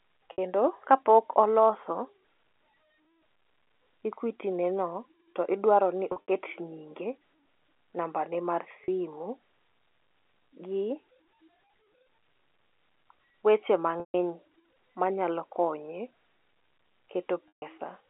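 Packet loss with pitch repetition hits this speech at 0.32, 6.12 to 6.28, 8.84 (just after "namba ne mar"), 14.0 and 17.48 s. The receiver repeats the last pitch period across each 40 to 140 ms gap, so the short gaps sound like a buzzy held tone and the longer ones fade out before the sound returns.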